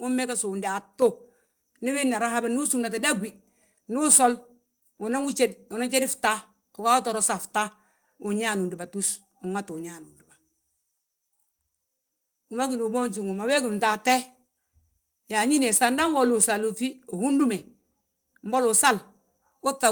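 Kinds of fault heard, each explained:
Microphone volume stepped up: at 1.02 s the call software lifts the input gain in one step, so speech and background jump about 6 dB louder together.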